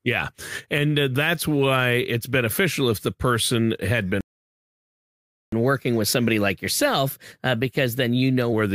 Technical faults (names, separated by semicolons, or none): playback stall; catch-up at higher speed